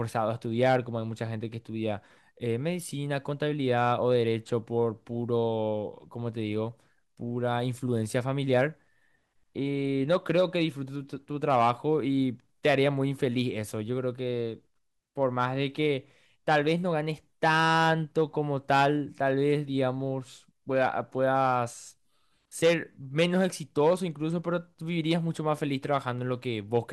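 Speech recording with no technical faults detected.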